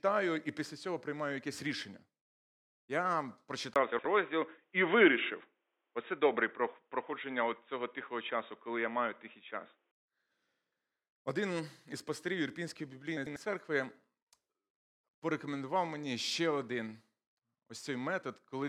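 An input switched to a poorer device at 3.74 s, lasting until 9.93 s, is the main fault in this speech recording. A brief gap of about 20 ms marks the change, after which the sound turns dull and boxy, with nothing above 3.8 kHz. There is a modest shift in level and a faint new noise floor sitting far below the speech. The likely cause is the system changing microphones or dropping to a headset's narrowband call profile, then returning to the original input.

Frames out of order occur at 3.92 to 4.05 s, 13.17 to 13.36 s and 14.70 to 14.77 s. In each, two adjacent blocks of audio play with their halves swapped, about 64 ms, 96 ms and 32 ms each respectively. The lengths point to 32 ms frames. This produces a garbled flutter, but no time is lost.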